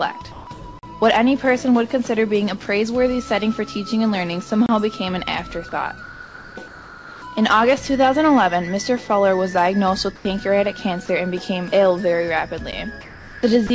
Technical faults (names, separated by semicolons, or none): comfort noise in place of the background; block of digital silence; sound dropped by the voice detector